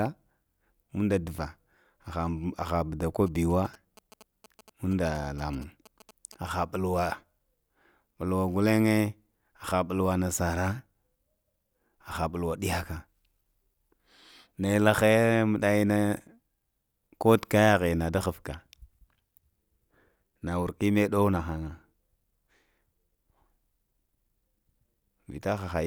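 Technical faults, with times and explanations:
3.27 to 6.49 s, GSM signalling bursts: a galloping dit-dit-dit of short buzzes sits under the speech for about three seconds, roughly 25 dB below it. A nearby 2G phone was sending brief groups of radio bursts while signalling to its network, and the audio circuitry rectified that RF into audible pulses. The bursts repeat at 216.7 Hz, which gives the buzz its characteristic low, rasping pitch.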